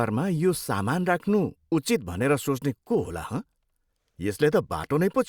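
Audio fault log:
No audible faults are present in this speech recording.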